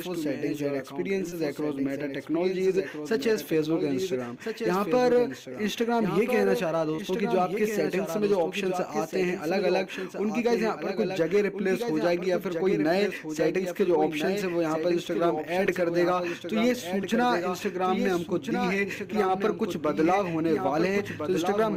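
From the start of the clip, every event is heard twice: a doubled audio track, with a second full-band copy trailing by roughly a second and a half and sitting about 5 dB below the first. The likely cause is the same signal reaching the mix over a second, slower path. The copy has no reverberant tail or tonal change. On a spectrogram every pattern reappears, slightly fainter, shifted right by the same fixed offset.

Short concealed packet loss then appears at 1.29–1.34 s, 6.96–7.03 s and 15.66–15.69 s. Each time, about 20 ms of the stream was missing. The decoder bridged the hole by extending the preceding sound, heard as a brief smear or wobble rather than silence. The 6.96 s spot sounds slightly clipped short, as if a few milliseconds never returned. On a spectrogram these spots show smoothed, repeated spectral frames.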